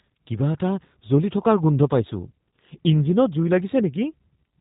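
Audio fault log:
Throughout: G.729 codec. The speech is intelligible but plainly rough and synthetic, with a buzzy, slightly metallic edge and no air or sibilant brightness, since nothing above about 3.8 kHz survives. The rasp fits an 8 kbit/s G.729A encoding, which keeps only coarse waveform detail: each 10 ms frame is rebuilt from a vocal tract filter, a pitch predictor and a handful of pulses, so the fine texture is approximated and audibly coarse.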